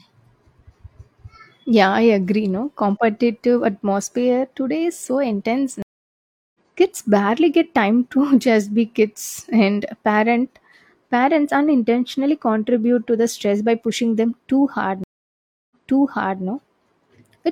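It's a speech clip with two stream reconnects. After "today is so intense" it drops out from 5.82 to 6.58 s, 0.72 s silent, and resumes about 0.7 s ahead. After "pushing them too hard" it cuts at 15.04 to 16.43 s, 0.67 s silent, and jumps back 0.73 s. Each time the connection broke and a fresh decoder picked up mid-stream.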